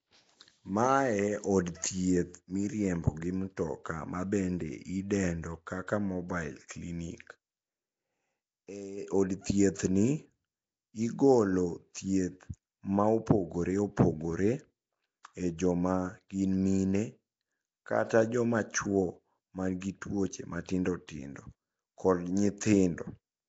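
From start to finish the speech has a rough, hissy halo and a smeared, underwater quality. Nothing is heard above 7.7 kHz. This is likely Nellymoser compression, at a rate that fits 32 kbps. Weak bands get no bits and come back as noise.

At 15.23 s a sharp attack arrives with a short hiss just ahead of it, spread over 19 ms. This is pre-echo. The codec spreads noise sized for the loud attack across its whole block, so the quiet moment before it fills too. The same happens at 19.81 s, after "kata joma chuo man" and before "gi tuoche matindo", spread over 15 ms. It happens again at 21.07 s, after "man gi tuoche matindo", spread over 17 ms. Each attack sounds soft and smeared.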